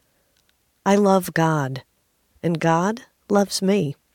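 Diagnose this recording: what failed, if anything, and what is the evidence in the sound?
Nothing failed here as far as I can hear; the speech comes across without anything in the signal chain calling attention to itself.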